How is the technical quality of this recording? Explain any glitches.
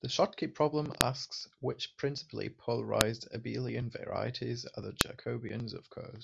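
The recording has one recurring glitch: a file header played as audio, at 1.01 s (just before "asks which principally"), 3.01 s (between "problem asks which principally" and "abelian varieties are the"), and 5.01 s (after "abelian varieties are the"). The speech was joined from 2-second pieces without stripping each piece's WAV header. Those header bytes were read as samples, producing a sharp, loud click at every seam regardless of the speech around it.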